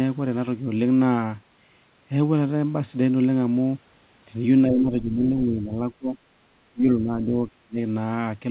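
From 4.66 to 5.78 s the speech sags by up to about 10 dB. From 5.98 to 6.17 s it drops briefly by about 25 dB, and from 6.71 to 7.78 s it nearly disappears in pieces, with dips of up to about 35 dB. This is speech suppressed in double talk, likely from an echo canceller that could not separate this side's talker from the overlapping loudspeaker echo and turned both down. All of it plays over narrowband call audio with nothing above 4 kHz, which fits G.711 mu-law.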